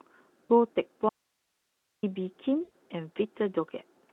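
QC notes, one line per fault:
0.46–0.52 s and 2.63–2.72 s: VoIP packet loss concealed by the speech codec. About 40 ms, then 80 ms, of lost audio is smeared into a fading buzzy tone or coloured noise rather than a clean gap, unlike a dropout.
1.09–2.03 s: audio dropout to a faint residue. The sound cuts abruptly to steady hiss roughly 50 dB down for 0.94 s, likely a lost signal with the path still live, not a natural pause.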